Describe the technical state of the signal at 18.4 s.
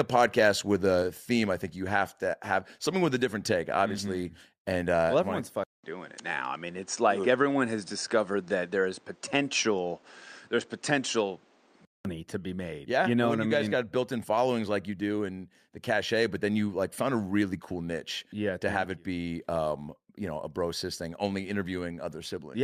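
At 18.4 s the speech signal is intact, with no audible fault at that moment.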